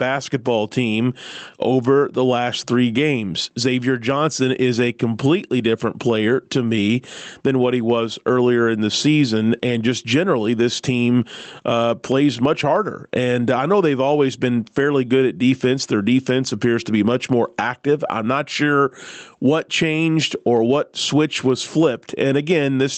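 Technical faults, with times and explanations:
Throughout, gain pumping: the level swings by about 15 dB, so loud and soft passages sit squashed together. The likely cause is input gain set far too high, with a fast limiter clamping each loud syllable and releasing in the gaps. A waveform shows flattened, near-uniform peaks. A spectrogram shows a cut-off near 8 kHz.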